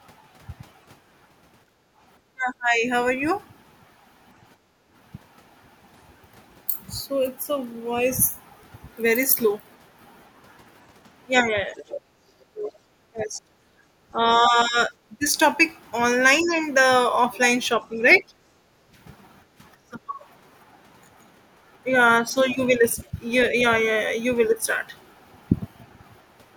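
Right from 1.66 s to 4.91 s the room tone keeps ducking. That's the background being gated by the echo canceller. It clamps the mic while the far end's audio is playing, so the ambience dips by up to about 12 dB in short bites, adding up to well under a second, then swells back when the canceller lets go. Inside that stretch, from 2.26 s to 2.85 s, the talker's own speech sinks hard, roughly 25 dB at its deepest, for about half a second. That's most likely speech suppressed in double talk: both sides overlapped, and the canceller couldn't tell the local voice from loudspeaker echo, so it pulled everything down.

The same thing comes back, longer, from 11.42 s to 23.15 s. The voice drops out in pieces, about 20 dB at worst and around three seconds in total. Mixed in there, the other side's voice leaks through from 11.78 s to 12.72 s at roughly 15 dB under the talker, and again from 16.45 s to 18.19 s at about 20 dB down. 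It's a second voice, likely leftover loudspeaker sound the canceller didn't fully strip out of the mic. Then at 18.6 s to 18.93 s the background gets gated once more, a quick dip of about 10 dB lasting about a third of a second before the room sound returns.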